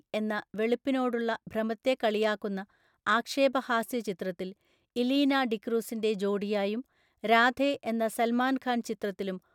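No technical faults occur at any point in the speech, so there is nothing to place in time order.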